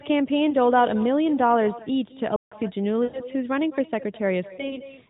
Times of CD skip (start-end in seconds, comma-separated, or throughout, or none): none